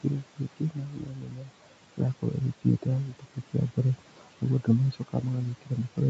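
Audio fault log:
Throughout, noise suppressor artifacts: the room noise, which sits about 17 dB below the speech, drops away in the gaps and swells back under each phrase. The suppressor judges each frequency band frame by frame and pulls down what it takes for steady noise by about 18 dB. Its gain keeps switching as the speech starts and stops.
0.01–1.67 s, 2.20–2.42 s, 2.82–3.78 s, 3.99–4.44 s and 4.92–6.1 s, speech cut by the noise suppressor: soft consonants, word tails and quieter stretches sound swallowed or fade out, dipping by as much as about 17 to 19 dB. The opening span loses roughly a second and a half, and the later ones lose shorter pieces. The suppressor mistook these low-level speech parts for background noise and lowered them along with it, which is why they thin out instead of staying level.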